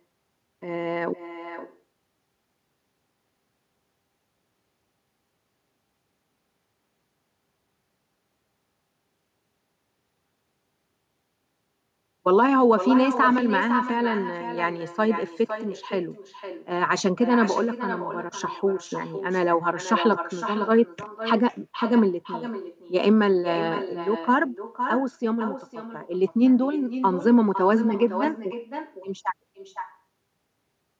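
Throughout the speech, echo with no canceller returns each phrase about half a second later, roughly 11 dB down, thinner, picked up from a far-end loudspeaker.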